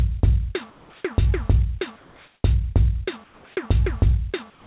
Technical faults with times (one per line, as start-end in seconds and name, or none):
0.70-1.04 comfort noise in place of the background
1.96-2.44 comfort noise in place of the background
3.24-3.56 comfort noise in place of the background
4.50-4.67 sound dropped by the voice detector